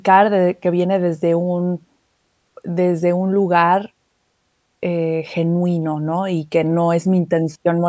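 No technical faults are audible.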